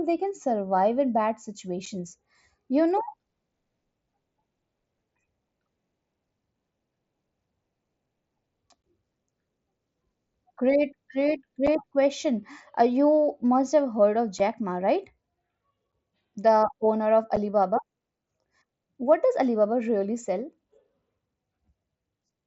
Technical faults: unconcealed Bluetooth headset packet loss

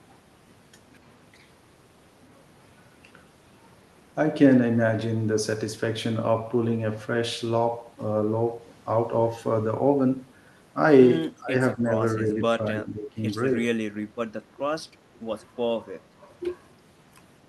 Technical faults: speech suppressed in double talk

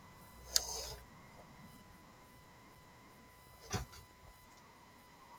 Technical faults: CD skip

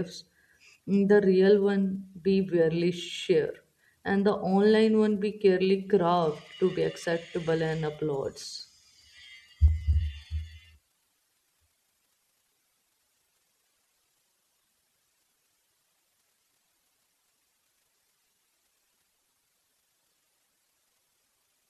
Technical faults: low bit depth with dither

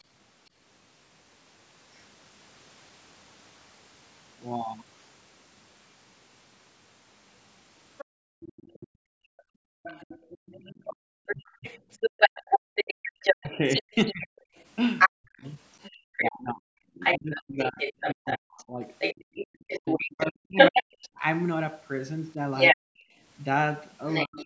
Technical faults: other side's voice leaking through; background gated by the echo canceller; speech suppressed in double talk

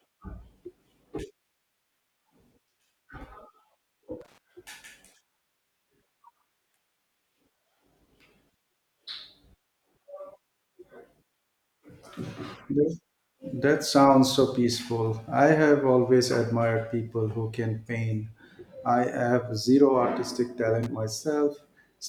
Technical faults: loose connector crackle

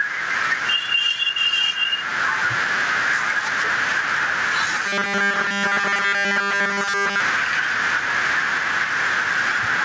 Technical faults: gain pumping; robotic sound from repeated short buffers

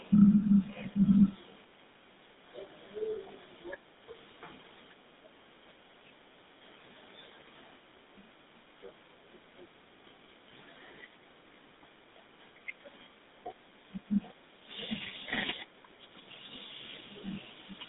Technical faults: GSM full-rate codec

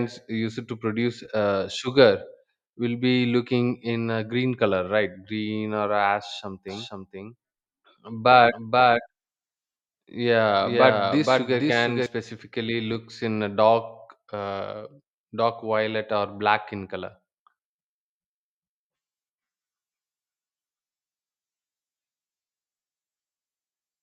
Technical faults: doubled audio track

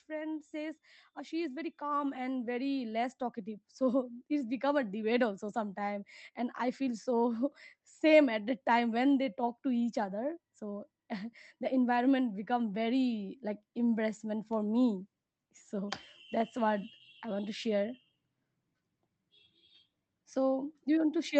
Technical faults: automatic gain rising

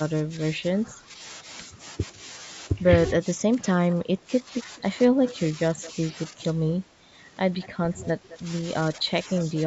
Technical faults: speech suppressed in double talk; echo leak

